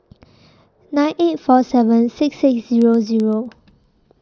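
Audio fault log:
2.69 to 4.22 s, filter restarted on every block: from 2.69 s to the end of the speech, a regular ticking sets in at about 7.81 per second, which fits a filter processed in 2048-sample blocks. The filter loses its memory at each block boundary and starts again from zero, so every block opens with a small transient. Because that jolt scales with the speech passing through, the ticks grow louder on stronger passages and fade in quieter ones.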